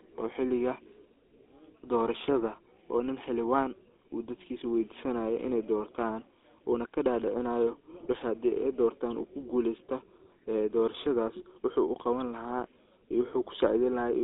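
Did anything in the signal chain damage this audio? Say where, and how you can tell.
Yes. The codec stage damaged it throughout: the GSM full-rate codec leaves a buzzy, gravelly roughness on the speech and a band of about 300 Hz to 3.6 kHz, which fits 13 kbps. Plain band-limiting alone would dull the sound without adding that rasp.

At the network or radio link, GSM bit errors hit from 7.94 to 8.23 s, right after "ini doortaan wuuna kadadicinayo". Corrupted filter, pitch and gain values make the decoder squawk, pop and gargle. Packet loss would instead leave gaps or smoothed-over repeats.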